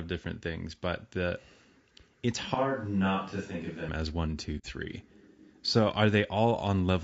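From start to finish the speech has the rough, grainy texture of low-delay AAC compression, likely AAC-ELD at a rate that fits around 32 kbps. Its short frames resolve the pitch harmonics poorly, so noise fills the gaps between them and the top band sounds thin and synthetic. The damage is plainly audible. Unlike packet loss or dropouts, it never comes and goes. It colours every moment of the clip evenly.

From 2.55 to 3.89 s, the sound jumps abruptly to a roomy, hollow tone with less bass. It drops about 5 dB in level, and background noise rises to roughly 35 dB below the speech. This points to a switch to a distant microphone, likely the close one's signal giving way to one further off. The change back, just before "as one two", is equally sudden. Reverb added in processing would keep the bass and level steady. Here both fall together at the switch.

From 4.58 to 4.66 s, just after "as one two", a soft-edged hole about 60 ms long opens in the sound. 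This is AAC frame loss with muting: the decoder zeroed the missing spectrum, and the overlapping windows fade the audio out and back in rather than cutting it. That smooth taper separates it from a hard dropout or a sample-level gap.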